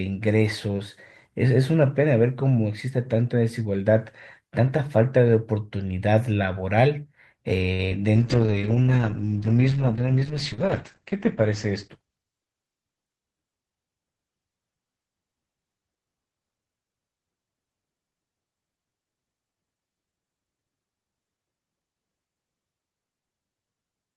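A recorded speech clip with a cluster of network-related faults between about 7.7 and 12.9 s. At 7.73 s the sound freezes and is held too long, until 7.81 s. That is a short stall from a late packet: the jitter buffer ran dry, so the receiver stretched the last sound for 54 ms until the packet turned up, then resumed from the same point. Nothing is lost, but everything after it is pushed 54 ms later. Just after, from 7.89 to 7.98 s, there is a brief smear and wobble. This is short concealed packet loss: about 20 ms of audio never arrived, and the decoder bridged the gap by extending the preceding sound, shaped from its pitch or as noise, before blending back into the real signal, leaving the passage slightly longer than it should be. From 8.18 s the speech turns rough and muffled, losing its top end, and it stays that way until 12.91 s. That is a call bitrate drop: the connection's bandwidth estimate fell, and the encoder was forced to code far more coarsely. 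The dullness suggests the audio band narrowed from about 20 kHz to about 8 kHz. The degradation is consistent with the rate falling from around 32 kbps to around 9 kbps, sitting at its lowest for about 3.2 s. Within that stretch, from 12.01 to 12.39 s, the speech sounds hurried but keeps its pitch. This is a jitter buffer speed-up: with too much audio queued, the receiver trimmed out small pitch-period slices over and over, playing at about 115% speed and removing something like 70 ms to bring the delay back down.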